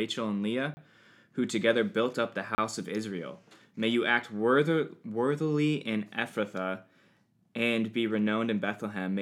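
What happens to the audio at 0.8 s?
Just before 0.8 s, from 0.74 to 0.77 s, there's a 30 ms block of digital silence right before "who together built up", probably an unfilled buffer, heard as a short hole.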